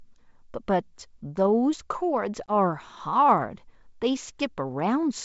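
At 2.46 s there's packet loss on the ADPCM call: a hard 20 ms hole, about one packet. The sound then comes back slightly distorted while the decoder's predictor catches up, settling by 2.52 s.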